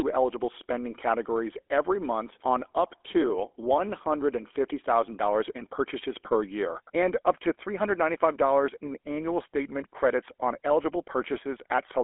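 Throughout, the speech carries plainly audible GSM full-rate codec damage, consistent with a 13 kbps stream. It has a buzzy, gravelly roughness from a vocal-tract model driven by sparse, regular pulses. A spectrogram shows a 300 Hz to 3.4 kHz band, with nothing above 3.8 kHz.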